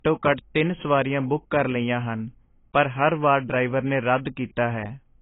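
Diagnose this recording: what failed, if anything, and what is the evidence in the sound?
Codec stage: low-bitrate audio saved at a high bitrate, likely a very low-bitrate encode re-saved as MP3. The speech has nothing above 3.8 kHz throughout.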